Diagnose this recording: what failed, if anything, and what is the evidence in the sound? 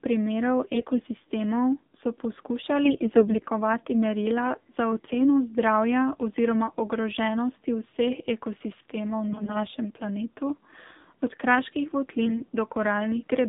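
Buzzy, synthetic speech confined to roughly 200 Hz to 3.7 kHz: the AMR narrowband mobile codec, at a low mode fitting about 7.4 kbps.

Hoarse, gargly bursts at 0.74–1.02 s, 2.84–3.49 s before "merila za", 9.28–9.65 s, and 12.26–12.43 s after "od kraških": AMR bit errors on the network link, misplacing excitation pulses.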